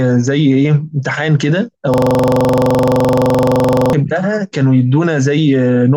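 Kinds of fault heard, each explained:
System hang loop: the computer or its audio driver stopped supplying new data, and the sound hardware kept replaying the same ring buffer. From 1.94 to 3.93 s, one 43 ms slice of the speech repeats exactly, over and over, which fits a 2048-sample buffer. That slice cycles about 23.4 times a second, so instead of continuing, the speech freezes into a rough, rattling drone at that rate for about two seconds.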